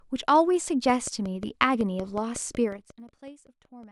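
Speech carries a regular train of clicks from 0.90 to 3.84 s, about fifteen at 5.45 per second and peaking roughly 5 dB above the signal, likely interference from nearby equipment. They tick even through pauses, unlike zipper noise. That zipper noise runs from 2.6 to 3.08 s as the level falls about 20 dB in 2 dB steps, roughly 30 per second, so the ticking follows the level movement rather than a fixed pulse.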